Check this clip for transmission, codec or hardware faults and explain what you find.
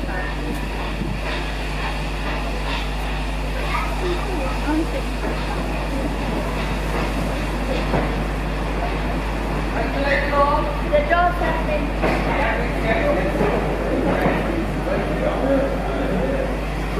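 Mains hum runs through the whole clip, from start to finish. It comes from the power line leaking into the signal path, most plausibly through a ground loop between connected equipment or from a nearby transformer's magnetic field. Here the hum sits at 50 Hz, which points to a 50 Hz supply, with some low harmonics stacked above it. It is a steady, buzzing low tone roughly as loud as the wanted sound, so it never fades into the background.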